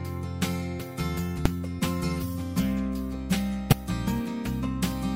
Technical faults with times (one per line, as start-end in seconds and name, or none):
1.45 damaged data in a compressed stream
3.70-3.73 damaged data in a compressed stream